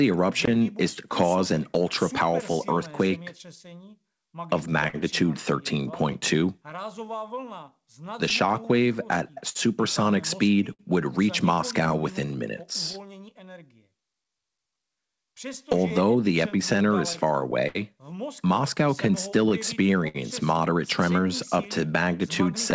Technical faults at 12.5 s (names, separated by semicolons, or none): clock drift between sender and receiver; repeated timing corrections; scattered short gaps